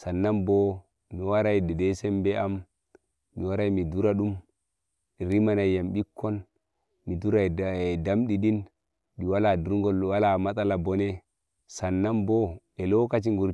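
A recording of speech with nothing technically wrong to be heard in it.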